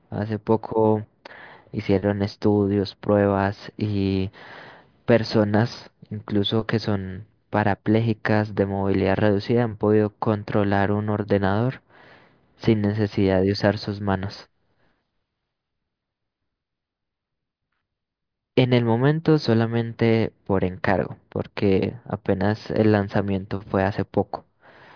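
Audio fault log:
Nothing stood out on listening to the speech in this recording.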